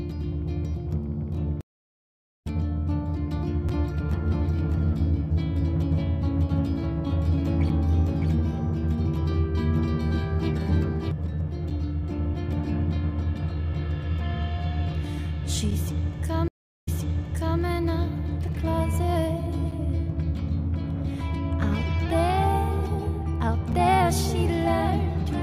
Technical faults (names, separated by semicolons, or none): stream reconnect; gap between chunks; doubled audio track